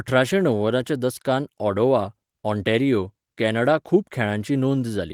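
No technical faults can be heard in the speech, which carries the light coding texture of Opus voice compression, consistent with its hybrid mode at around 24 kbps, and keeps a full band that reaches up to about 20.4 kHz.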